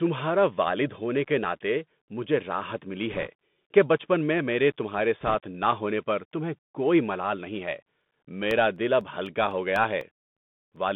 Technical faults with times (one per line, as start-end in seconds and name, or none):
0.00-10.96 Bluetooth CVSD headset codec
3.10-3.28 bit errors on a Bluetooth voice link
5.21-5.35 bit errors on a Bluetooth voice link
8.01-10.76 periodic USB or driver dropouts